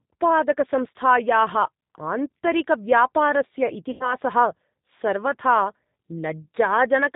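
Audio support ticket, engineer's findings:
Whole clip: dull, band-limited speech, nothing above 4 kHz, slightly rough and synthetic texture. Probable component: G.729 codec in the VoIP path, which fits an 8 kbit/s stream. Speech is rebuilt from vocal tract filter, pitch predictor and sparse pulses.

3.91–4.15 s: speech stretched and fading, then stays weak and distorted briefly after. Probable cause: VoIP packet loss concealed by the speech codec. About 90 ms missing, fits three lost packets. Decoder extrapolated its last pitch and filter at falling gain, and the recovery lag comes from each frame building on the last.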